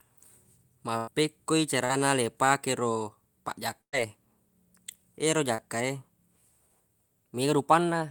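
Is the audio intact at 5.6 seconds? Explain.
No. From about 5.55 to 5.60 s there is a short concealed packet loss: roughly 40 ms of the speech never arrived in time, and the receiver patched about 36 ms of it by extending the preceding sound before fading back into the real signal. It is heard as a brief smear or wobble. On a spectrogram, the harmonics or noise run unnaturally flat across the gap; the waveform shows a repetitive, evenly shaped stretch with a crossfade at its end.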